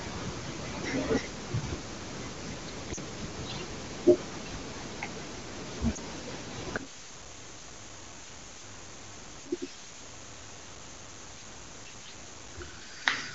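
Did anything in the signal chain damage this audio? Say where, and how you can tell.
Yes, in three places. At 2.95 s and again from 5.95 to 5.97 s the speech briefly dips and warbles, as if it were being smoothed over rather than cut. This is lost AMR speech frames on the network or radio leg. Corrupted frames fail their checksum, and the AMR-WB decoder, which sounds clean at 23.85 kbit/s, fills the gaps by repeating its last good settings at reduced gain. The first gap covers two 20 ms frames (40 ms) and the second covers one.

From 6.77 s to the end, the speech collapses by about 33 dB to a faint residue, and the centre of the sound is almost entirely gone. That depth of cancellation points to one channel inverted, most likely a polarity-reversed leg in the analogue wiring or stereo path. When the two nearly identical channels are summed to mono, their common content cancels and only their small differences remain.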